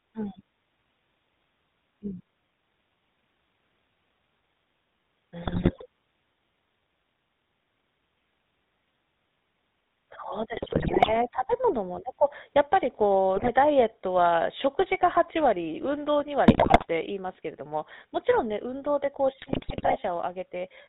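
From start to finish the speech carries the coloration of the GSM full-rate codec, and the damage is plainly audible. The codec models the vocal tract and excites it with a regularly spaced pulse train built from only every third residual sample. That decimated excitation leaves a buzzy, gravelly roughness on voiced sounds, and nothing above 4 kHz survives, so sibilants are dull. The overall character fits a 13 kbps full-rate stream.

Five bursts of GSM bit errors break through this: 5.42–5.86 s, 10.54–11.16 s, 13.36–13.49 s, 16.48–16.87 s and 19.4–19.97 s. In each, corrupted filter, pitch and gain parameters reach the decoder. The spectrum warps frame by frame and the level jumps, so the speech breaks into squawks, pops and gargling. The density of the damage points to a few percent of bits flipped.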